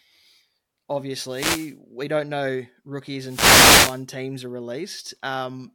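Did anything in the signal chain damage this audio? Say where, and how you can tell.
Yes. Two wireless microphone noise hits occur in the analogue radio link, at 1.27 to 1.77 s and 3.22 to 4.04 s. As the FM carrier fades, receiver hiss surges as a swish of static over the speech, showing as broadband vertical smears on a spectrogram and fuzzy, thickened waveform sections.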